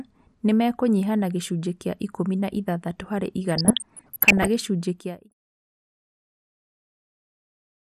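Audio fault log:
throughout: MP2 compression. The speech sounds dull and a bit gurgly, with a grainy edge on everything. That's what you get when the coder runs short of bits: the top sub-bands switch off and flicker back in, and the bands left carry only coarse steps. The damage is plainly audible, which fits a rate of around 80 kbps. MPEG Layer II is the likely cause, with the usual low-rate digital radio sound.
3.49 to 4.48 s and 5.31 to 5.65 s: DAB burbling. Both stretches break into burbling over the speech. Bit errors, roughly half a percent in the first burst and a bit more in the second, are slipping past the error correction. Wrong samples put short blips of noise in single sub-bands, and wrong scale factors make sub-bands jump in level for up to a frame. The second burst lands right at the tail of the fade-out.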